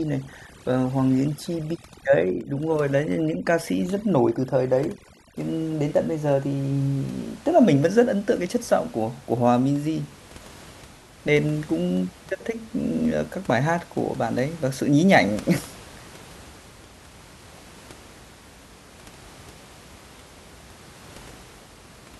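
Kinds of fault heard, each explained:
Overdone noise removal: a noise reducer set far too aggressively clamps down on frequency bands it judges to be noise, taking low-level speech detail with them. Over the first 5.4 s the background drops and breaks up into twinkling specks.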